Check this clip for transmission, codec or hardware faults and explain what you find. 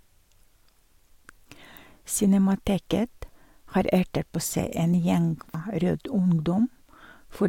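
One fault stands out in this speech clip. At 5.54 s, right after "en gjeng", there is a sudden skip. It sounds like audio missing between chunks. About a third of a second of sound is gone, and the two sides are butted together with no gap. The likely cause is a recorder working in 2.5 s blocks that drops a short stretch while closing one block and opening the next. The jump is abrupt, and part of the speech is lost.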